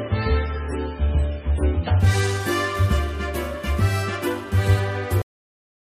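From 0 to 2.0 s the audio has the sound of an adaptive stream starting at a low bitrate. Nothing above 10 kHz, stronger codec artefacts, consistent with roughly 16 kbit/s MP3. At 2.0 s it steps up cleanly to a fuller quality, which fits around 128 kbit/s. At 5.22 s there is a cut-off end: the final buffers never played, so the sound stops abruptly into digital silence with no decay.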